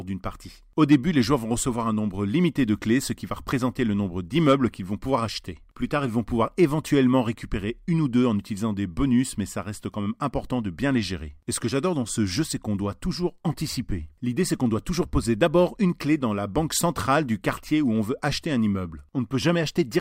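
No technical faults can be heard anywhere in this recording.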